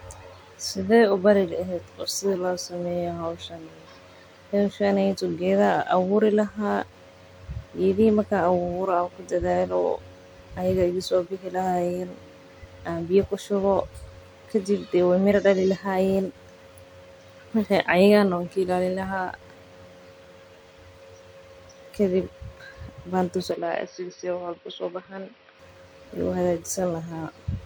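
Input switched to a poorer device, from 23.51 to 25.59 s: the speech abruptly turns dull and boxy, with nothing above 5.7 kHz, drops a few decibels in level and picks up a faint new background noise, most likely because recording moved to a narrower-band microphone, with no gap at the switch.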